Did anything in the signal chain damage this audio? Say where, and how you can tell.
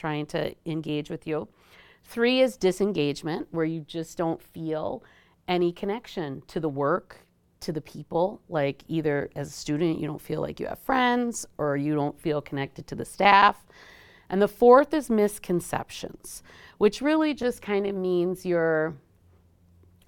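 Yes. The speech goes through a chunked processing or buffering stage with overlapping chunks. There's a small stutter at 5.40, 11.41 and 17.42 s, about 6 s apart, which matches a 6-second chunk size. At each join the new chunk starts early, so about 13 ms of audio plays twice. That tiny repeat lands as a click or hiccup at every boundary, and the exact regular spacing gives it away.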